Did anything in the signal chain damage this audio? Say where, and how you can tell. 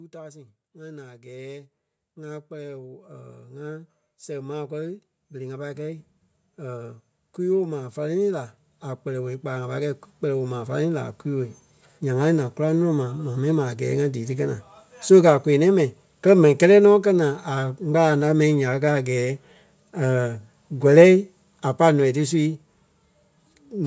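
Yes. In the call processing stage, automatic gain rising lifts the level by about 22 dB from 0.11 s to 12.38 s, settling just before "naa goraŋ". The voice and the background noise climb together over those twelve seconds, which shows the gain control boosting a signal it judged too quiet. A talker moving closer would raise only the voice, not the noise floor. The call's microphone processing also band-limits the sound, with nothing above 8 kHz.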